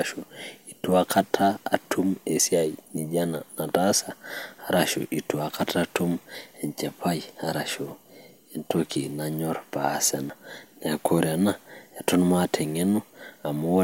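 Three quick skips land at 2.40, 6.35 and 10.30 s, evenly spaced about 4 seconds apart. Each drops around a twentieth of a second of the speech, and the two sides butt straight together with no gap of silence, so it comes across as a small jump. That regular spacing likely points to audio missing between chunks, with the recorder losing a sliver each time it closes one 4-second block and opens the next.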